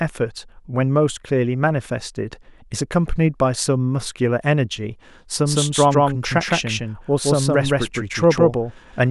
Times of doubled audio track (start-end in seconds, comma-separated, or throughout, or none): 5.45-9.11